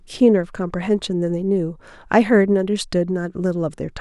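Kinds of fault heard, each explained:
No technical faults can be heard in the speech; the signal holds steady, with no dropouts, distortion or interruptions anywhere in it.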